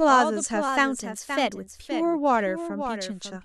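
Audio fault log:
Throughout: doubled audio track. A second full-band copy of the speech trails the original by about half a second, roughly 10 dB quieter, with no decay or room colour. This is likely a second capture through a slower path, mixed back in.
0.69–1.89 s: drift correction step. Speed rises by 5.57% and pitch by 93.8 cents, nearly a semitone, then both snap back at the end. This likely reflects clock-matching software changing the playback rate in one step to adjust its buffer.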